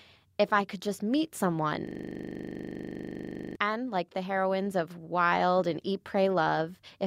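Speech clip with a system hang loop from 1.87 to 3.56 s, right after "I could just meet": a 40 ms buffer repeats about 42 times, producing a rough 25 Hz buzz.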